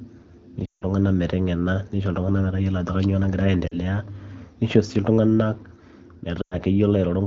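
At 0.65 to 0.85 s the speech smears and fades, the sound of lost AMR speech frames: the decoder keeps replaying its last good pitch and vocal tract settings at falling gain. That run fits about eight 20 ms frames and nearly dies out before recovering roughly. Shorter gaps follow at 3.67 to 3.74 s, a quick drop toward silence, and 6.41 to 6.55 s, a dip that falls to near silence, over the clear wideband coding.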